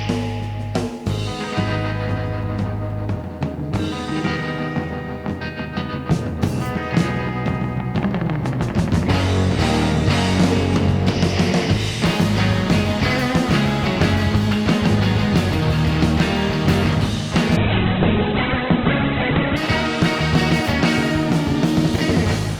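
From about 17.57 s to 19.57 s the audio drops to an adaptive stream at a lower bitrate. For those two seconds the top end vanishes, with nothing above roughly 4.2 kHz, and what's left picks up a thin codec smear. The switch in and out is abrupt but seamless, with no gap or dropout. It sounds like the player fell back from a decent Opus rendition, something around 64 kbit/s, to a very lean one near 8 kbit/s while the connection sagged.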